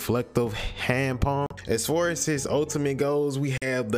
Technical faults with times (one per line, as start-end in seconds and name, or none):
1.46-1.54 Bluetooth dropout
3.58-3.66 Bluetooth dropout